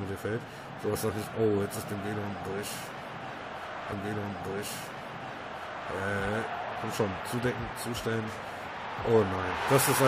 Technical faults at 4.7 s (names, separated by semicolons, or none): stream segment repeated